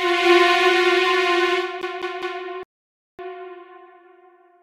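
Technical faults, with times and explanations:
1.82–2.42 s, CD stuck on one turn: the same 0.2 s slice repeats three times with brief mutes, as the laser jumps back one track each revolution.
2.63–3.19 s, rebuffering stall: the sound drops to silence for about 0.56 s, then resumes exactly where it stopped. The player ran out of data, so only time is added.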